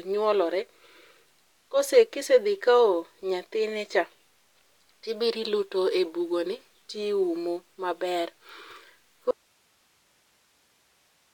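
An audio dropout to a faint residue begins at 9.31 s and runs to the end of the clip. The speech cuts off abruptly in mid-flow rather than pausing or fading, and what remains is only a steady hiss sitting roughly 40 dB below the speech level. This is likely a break in the incoming signal while the recording path after the break stayed live, so its own noise floor kept passing through.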